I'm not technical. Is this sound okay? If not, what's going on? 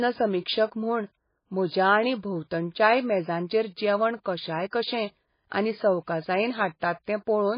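No. MP3 compression, throughout the clip: the speech sounds dull and watery, with nothing above 5 kHz, so the crisp top of s and t sounds is gone and some consonants swirl or chirp. The likely cause is an MP3 saved at a very low quality setting. With too little data to work with, the encoder throws away the treble and the quieter parts of the sound, and those parts flicker in and out from moment to moment.

Pre-echo, at 4.24 s, right after "भोंवतणच्याय मेजांचेर जेवण": a brief hiss comes just before a sharp sound begins, and the start of that sound is softened. The encoder handles the audio in small chunks and spreads its noise evenly across each one. Here a sudden loud onset fell late in a chunk, so noise meant to be hidden under the loud part spilled into the quiet moment just before it.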